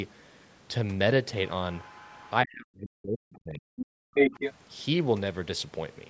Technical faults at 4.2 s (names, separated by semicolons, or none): speech suppressed in double talk; other side's voice leaking through